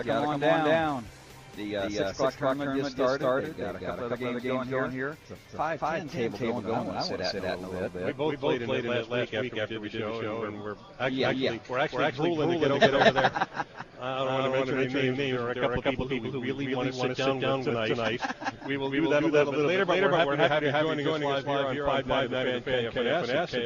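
A second capture path or an out-of-step edit likely mixed in a doubled audio track, so an equally loud, dry copy trails the original by about a fifth of a second throughout.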